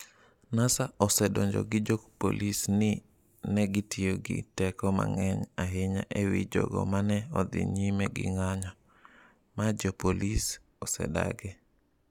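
No technical faults are audible anywhere in the recording.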